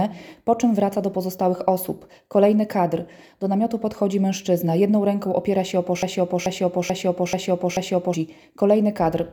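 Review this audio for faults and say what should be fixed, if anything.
From 6.03 to 8.14 s, a 0.44 s fragment plays back to back five times, identically, a broken-record loop that erases whatever should have sounded there. Likely cause: a stalled player, encoder or stream that kept resending its last buffered fragment. Fix it by adding stall detection that outputs silence or reconnects instead of replaying stale buffer contents.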